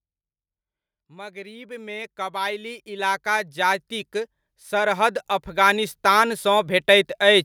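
From 1.08 s to 6.34 s the automatic gain control judges the input too quiet and steadily raises its gain, by about 19 dB in all. This is automatic gain rising: the speech and the background noise beneath it swell together, growing louder over those five seconds.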